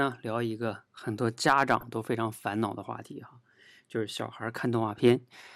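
A speech clip with a short burst of DAB burbling from 1.77 to 1.87 s. For about a tenth of a second short blips of noise break into the speech. Weak reception let bit errors slip past the error correction into the MP2 audio data. Corrupted samples put noise blips in single sub-bands. The burst covers 11 damaged frames at an error rate of roughly a few tenths of a percent.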